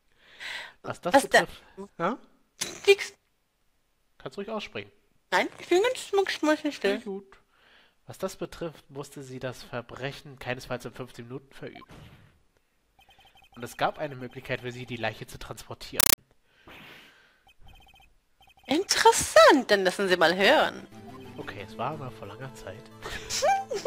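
At 16.00 s the audio gives way to a compressed stream played as audio, lasting until 16.18 s. An AC-3 bitstream on the digital link has been treated as ordinary PCM and not decoded, so each coded frame plays as a dense burst of noise about 8 ms long, followed by silent padding, repeating at 31.25 Hz. The result is a very loud, harsh chattering static, and its density fits a 384 kbps stream.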